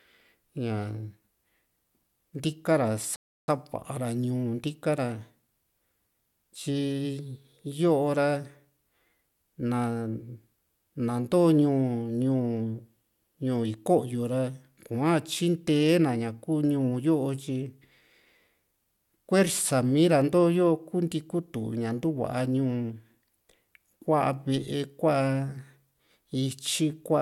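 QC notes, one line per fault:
3.16–3.48 s, rebuffering stall: the speech cuts to silence for about 0.32 s and then picks up exactly where it broke off, with nothing skipped. The player drained its store of downloaded audio and waited for more to arrive before continuing. Unlike a dropout or packet loss, which leaves a hole that swallows part of the sound, this pause is inserted into the timeline, so the gap adds time rather than removing any.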